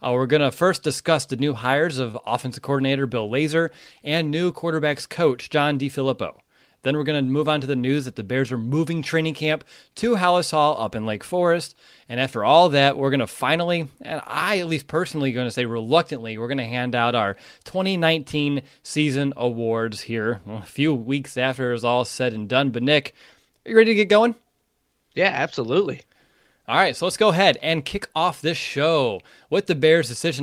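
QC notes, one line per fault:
2.11 to 2.15 s, short concealed packet loss: a brief smear or wobble where 20 ms never reached the decoder in time, so the receiver extended the preceding sound and blended back into the real audio.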